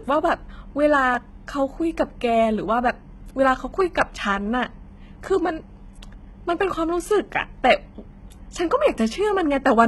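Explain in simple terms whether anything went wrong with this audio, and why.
HE-AAC compression, heavy and present from start to finish, is the likely cause of what you hear. Only the lower part of the speech is kept; the treble is rebuilt by copying lower sounds upward, so it doesn't match, and s sounds come out gritty, metallic or lispy.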